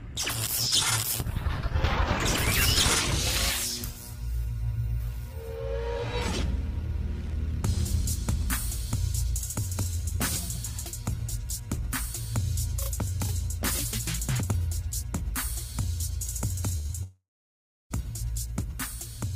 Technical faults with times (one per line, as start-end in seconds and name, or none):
16.77-16.86 burst of packet loss
16.86-16.91 short concealed packet loss
17.03-17.92 long network dropout